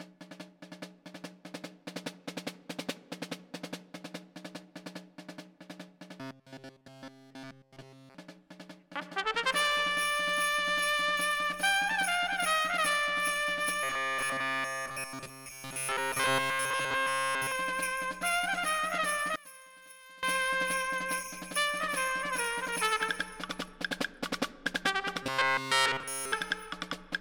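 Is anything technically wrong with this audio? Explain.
Yes, there are two problems. From 6.20 to 8.15 s, 13.83 to 17.52 s and 25.23 to 26.32 s you get robotic sound from repeated short buffers: a rigid 133 Hz metallic buzz, likely from a roughly 7.5 ms chunk being looped in place of nearly all the real audio.

Between 19.36 and 20.23 s the sound drops by about 22 dB. That points to one channel inverted: with the polarity of one side flipped, whatever both channels share cancels when they're summed to mono.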